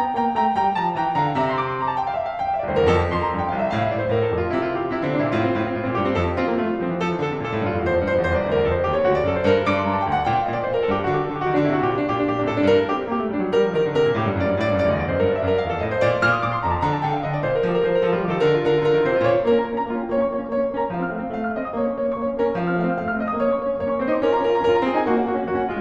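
No technical faults can be heard anywhere in this music recording.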